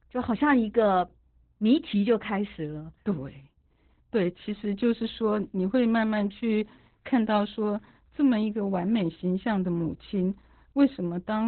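From start to finish the speech carries heavy Opus voice compression. The SILK coder has narrowed the band to narrowband, so nothing is heard above about 4.3 kHz, consistent with a bitrate near 8 kbps. Unlike a simple low-pass filter, the coarsely coded excitation also makes the speech hoarse and robotic, not just muffled.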